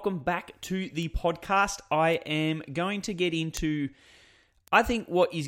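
At 1.03, 2.14, 3.57 and 4.68 s the speech carries a bit error spike. A single flipped bit makes one or two samples jump and snap back. Each is a sharp, broadband tick, unrelated to the voice. Most peak near about -22 dBFS; the 3.57 s tick is louder, about -10 dBFS.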